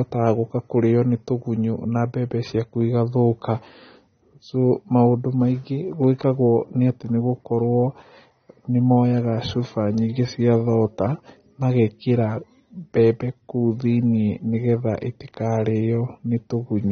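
From start to finish the speech carries AAC compression damage, plainly audible: the sound is dull and smeared, with a watery, fizzy texture on sibilants and held vowels. Nothing survives above 6.3 kHz, so a spectrogram shows a hard flat ceiling there, with patchy holes and blotchy noise-like fill in the bands below. The likely cause is AAC-LC encoding starved of bits, which fits a low bitrate around 24 kbps.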